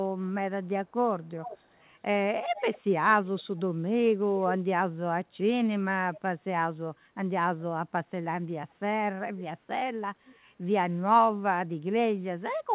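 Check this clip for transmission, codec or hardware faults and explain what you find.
One fault stands out, recurring through the speech. Echo leak at 0.63–1.89, 2.56–3.43, 6.13–6.21, 8.70–8.74, 9.38–9.42 and 10.25–10.36 s: a faint copy of the speech returns about 410 ms late, roughly 15 dB down at first and fainter afterwards, likely from a loudspeaker whose echo canceller let residue through. The whole clip stops at 4 kHz, which fits a narrowband call codec.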